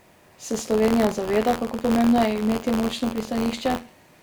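A steady robotic buzz near 86 Hz rattles through the speech for the whole clip: buffer tearing, where a small slice of each buffer replays audio about 50 ms old, which fits a 512-sample buffer.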